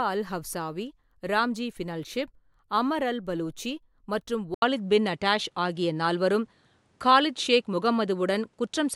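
At 4.54 s the speech drops out for a brief 80 ms gap, and from there to the end the sound turns duller and boxier. Nothing above 11.4 kHz survives, the level shifts by roughly 5 dB, and a new, faint background noise sits well below the speech. This is most likely an input switched to a poorer device partway through the recording, with a narrower-band device bringing its own tone, gain and noise floor.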